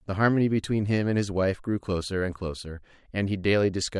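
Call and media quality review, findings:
No audible faults found.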